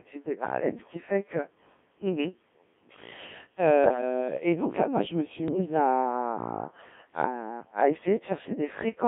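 From start to finish the speech sounds robotic and buzzy, confined to about 200 Hz to 3.6 kHz, because the Codec 2 vocoder resynthesises it from pitch and envelope, at a rate near 1.3 kbit/s. From 3.84 to 4.01 s, and again from 5.48 to 5.66 s, the voice lurches in pitch and level into warbling gibberish: bit errors on digital voice radio, roughly one bit in ten and then one in twenty, corrupting a few vocoder frames each time.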